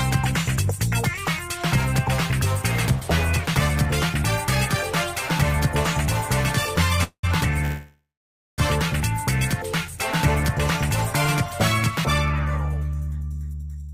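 At 7.03 s the audio stops and the last sound carries on as a fading buzz or hiss that dies into about 90 ms of silence before play resumes at 7.25 s. The same happens again from 7.65 s to 8.60 s, this time with about 550 ms of silence. These are call audio freezes, likely from packets held up in transit until the jitter buffer ran dry. Unlike a dropout, nothing is lost. The audio picks up exactly where it stopped, so the gaps of 0.2 s and 0.93 s are added delay.

From 12.94 s to 13.89 s the audio runs at about 119% speed with its pitch unchanged. This is jitter buffer speed-up. The receiver trims short pitch-period slices over and over, removing roughly a fifth of a second so it can catch up. A simple playback-rate change would raise the pitch. Here the pitch holds steady and only the pace is hurried.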